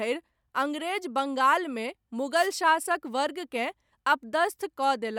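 At 2.35 s there's a wireless microphone noise hit lasting until about 2.49 s: a quick swish of static over the speech. The FM radio link from the mic faded as reflected signals cancelled, so receiver noise rose.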